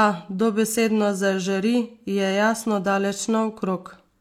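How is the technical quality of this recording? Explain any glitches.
No glitches can be heard anywhere in this speech recording. There is nothing technical here that needs explaining.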